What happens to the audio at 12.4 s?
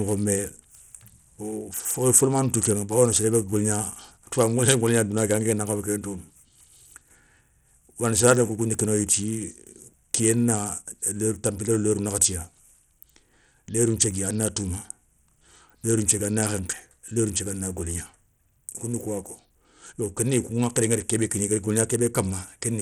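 At 12.4 s, as throughout, the speech's treble flickers under a gritty grain. This is likely Bluetooth SBC compression starving the upper sub-bands at a bitrate near 80 kbps.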